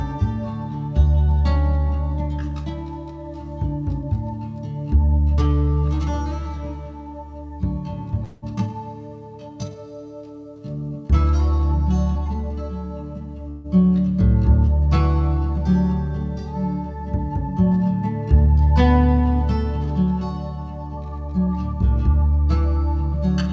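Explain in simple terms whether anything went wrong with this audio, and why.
Two things went wrong, both in how the call delivered the audio.

The first is a call audio freeze, at 8.24 to 8.44 s and again at 13.51 to 13.66 s. The likely cause is that chunks of audio were held up on the network, so the receiver's waiting buffer ran dry. To cover the wait, the receiver stretched the last bit of sound into a short fading buzz, about 0.18 s the first time and 0.14 s the second. Then the audio picked up exactly where it had stopped, so nothing was lost. The sound just pauses briefly and arrives a little later.

The second is a jitter buffer speed-up, at 12.15 to 13.36 s and at 20.97 to 21.48 s. After delays, the receiver was holding more audio than it wanted, so it caught up by snipping out many tiny slivers of sound in quick succession. In total it removed about 0.2 s in the first stretch and about 0.1 s in the second. 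The audio plays about 15% faster there without changing pitch, so it sounds briefly hurried.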